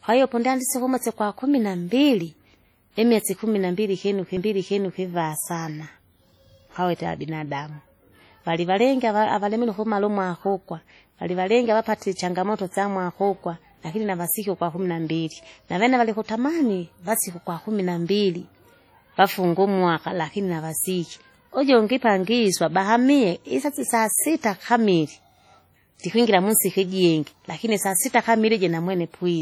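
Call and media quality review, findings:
Heavy washy, ringing smear with signal-breathing hiss throughout; likely WMA compression, low bitrate around 32 kbps; spectrogram shows smeared, blurred detail and gappy weak components.

CD skip at 4.37 s, just after "imwesi kumi": tick with a mute of a couple of milliseconds, then a jump in position; waveform shows an abrupt discontinuity, spectrogram a thin vertical line.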